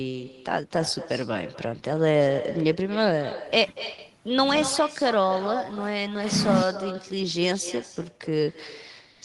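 Echo with no canceller runs through the whole speech clip. The far end is playing the call over a loudspeaker, and its microphone feeds that sound straight back because nothing strips it out. Every phrase is followed, roughly a fifth of a second later, by a copy about 12 dB quieter. It sounds thinner than the original, a faint shadow that trails each syllable and smears the gaps between them.

Clock drift between sender and receiver is also present from start to finish. The sender's audio clock runs slow, by something like 4 percent, compared with the receiver's. The jitter buffer keeps draining faster than it refills, so the receiver has to patch the difference continually. The result is a steady undercurrent of small timing hiccups, uneven in spacing, rather than any single obvious break.

Repeated timing corrections from 0.12 s to 8.45 s are how that drift shows up. The receiver keeps repeating short slices of audio to stretch the material and stay in step, playing at about 97 percent speed and adding roughly a third of a second over the stretch. 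Each edit is tiny and all lean the same way, so they come across as slight stumbles and a faintly dragging, unsteady tempo.

A short stall from a late packet occurs at 3.92 s to 4.01 s, and again at 9.13 s to 9.22 s. Both times a packet arrived after its slot, the buffer ran dry, and the receiver held the last sound for 60 ms before resuming exactly where it left off. Nothing is lost, but the held sound lingers unnaturally, with a faint buzzy or dipped quality, and the delay grows by 60 ms each time.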